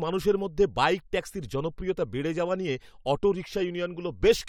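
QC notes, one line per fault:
No fault found.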